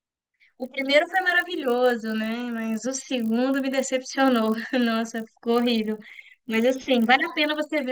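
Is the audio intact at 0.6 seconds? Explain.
No, at 0.6 s and throughout, the resampler restarted on every block, so each 20 ms block edge carries a small error, heard as a 50 Hz buzz only while speech sounds, with no gaps, unlike dropouts.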